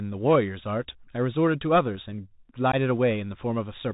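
From the first moment the speech carries the sound of a Bluetooth CVSD headset codec, which fits a 64 kbit/s narrowband link. Each sample is coded as a single up-or-down step whose size adapts, so nothing above 4 kHz gets through. S sounds turn scratchy, loud bright passages overrun the step and distort, and a granular hiss sits beneath everything. That grainy, slope-limited roughness is what separates it from a plain low-pass filter or a clean telephone band.

At 2.72 to 2.75 s there is unconcealed Bluetooth headset packet loss. About 15 ms of audio, likely a couple of short voice packets between headset and phone, never arrived and was dropped with nothing to cover the gap. The hole has hard edges, and the speech returns quieter for a moment as the CVSD step size rebuilds. Because it is a brief gap rather than repeated or smeared sound, it cannot be mistaken for concealment artefacts or a buffer glitch that loops audio.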